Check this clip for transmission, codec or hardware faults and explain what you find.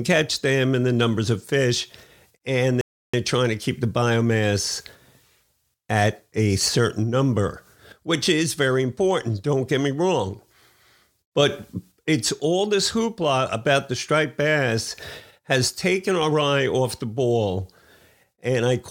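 One transmission fault: a rebuffering stall from 2.81 to 3.14 s, between "numbers of fish and" and "they're trying to keep". The player's buffer ran dry, so the speech pauses about 0.32 s in silence, then resumes exactly where it stopped; unlike a dropout, nothing is missing.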